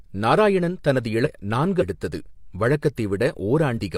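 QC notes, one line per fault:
1.22–1.27 s, 1.77–1.83 s and 3.73–3.79 s: compressed frames skipped. The speech lurches forward at each point. Roughly a second, half a second and 0.3 s go missing. Whole 42.7 ms coded frames were never decoded, so the audio jumps ahead at each join.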